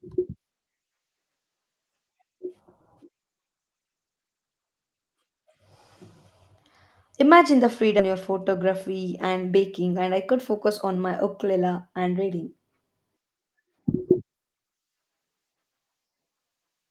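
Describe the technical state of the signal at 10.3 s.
At 10.3 s the receiver's jitter buffer is doing a speed-up: it had filled past its target, so from 9.90 to 11.81 s it trims the backlog by repeatedly cutting out short stretches a pitch period or so long, about 150 ms in all. The speech in that span plays at about 108% speed with its pitch unchanged, so it sounds hurried. The call codec's roughly 12 kHz band limit also carries through.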